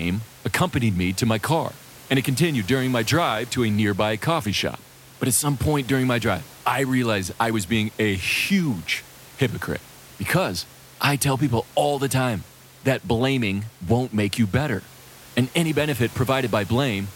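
The speech carries no technical faults, with only the room's own background noise sitting about 23 dB beneath it.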